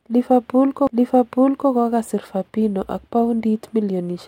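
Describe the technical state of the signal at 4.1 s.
At 4.1 s the speech signal is intact, with no dropout, distortion, glitch or other audible fault.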